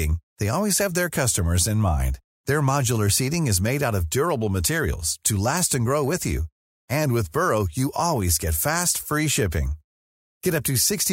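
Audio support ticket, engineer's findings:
Engineer's findings: no audio faults found in the speech recording.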